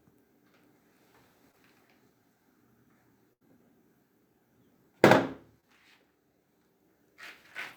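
At 1.51 to 1.55 s there is a brief smear where the sound seems to hesitate for an instant. This is short concealed packet loss: about 20 ms of audio arrived too late to decode. The receiver filled the hole by extending the preceding sound for roughly 17 ms and then crossfaded back into the real signal. The join is audible as a tiny wobble rather than a gap.

From 3.33 to 3.43 s the sound turns into a held, flattened tail that fades away before the audio picks up again slightly further along. This is a burst of packet loss, about 80 ms lost in one stretch. The decoder kept repeating and attenuating the last sound for around 75 ms. Whatever happened inside that window is simply missing, so the sound resumes with a small jump forward.

At 5.61 to 5.64 s the same brief smear returns, another short concealed packet loss. About 20 ms went missing and roughly 19 ms of extrapolated sound stands in for it. 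The seam is again a momentary blur rather than silence.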